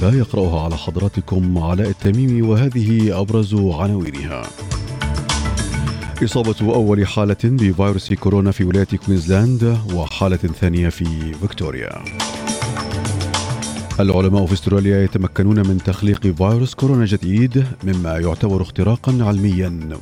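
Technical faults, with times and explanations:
2.05, 4.06, 6.07, 8.09, 10.09, 12.11, 14.12 and 16.14 s: gap between stream segments. Consecutive 2-second segments are timestamped slightly apart, so playback inserts silence between them. Each is a hard-edged dropout of 4 to 20 ms, recurring every two seconds, with no audio lost.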